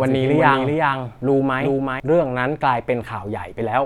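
From the first moment until 2.0 s, the speech is shadowed by a second, full-band copy trailing around 400 ms behind and about 5 dB quieter. It has no reverb tail, and it cuts off abruptly at 2.0 s. This doubled audio track is likely the same signal captured again through a slower path.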